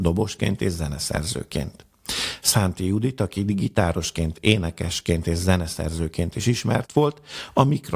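No technical faults can be heard anywhere in this recording.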